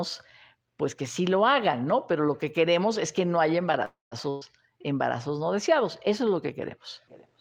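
Speech, with two faults close together right after "es que no haya". From 3.85 to 4.15 s the last sound is stretched into a fading buzz or hiss that sinks into about 160 ms of silence, then the speech picks up exactly where it left off. This is a call audio freeze, likely packets held up until the jitter buffer ran dry. Nothing is lost, only delayed. Then, from 4.30 to 4.44 s, a burst of packet loss turns the sound into a short fading fill with no silence. Unlike the freeze, about 120 ms of speech is skipped before "embarazos no deseados" resumes further on.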